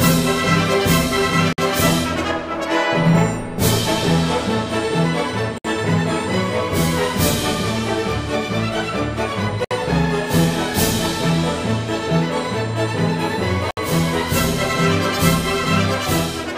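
Gaps at a join of encoded pieces fall at 1.53, 5.58, 9.64 and 13.71 s, every 4 s. Separately encoded chunks kept their encoder delay and last-frame padding, so silences of 53 ms, then 64 ms, open with smeared edges before the sound resumes.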